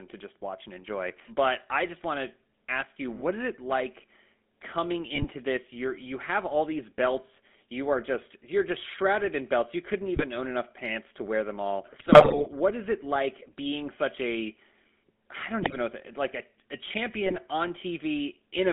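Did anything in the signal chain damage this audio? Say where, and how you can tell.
Yes, at the codec stage: the whole clip has the buzzy, gravelly roughness of the GSM full-rate codec, squeezed into a 200 Hz to 3.5 kHz band, which fits 13 kbps pulse-excited vocoding.

On the radio link, GSM bit errors cause squawks and gargling at 0.81, 5.15, 10.16, 11.98 to 12.47 (after "to wear them all"), 15.62 and 17.26 s, where corrupted filter, pitch or gain values warp the decoded frames.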